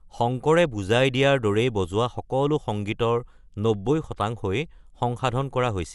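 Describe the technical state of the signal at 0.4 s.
At 0.4 s the speech is dull and rough, with fluttering noise around tones, likely from Dolby Digital compression at a rate that fits about 64 kbps, present throughout. A spectrogram shows nothing above 11.5 kHz and speckled, noise-filled bands where mantissa bits were dropped.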